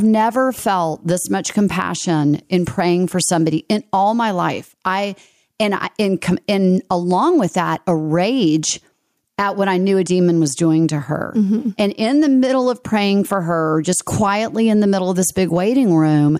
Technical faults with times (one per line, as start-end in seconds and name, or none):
0.00-16.40 gain pumping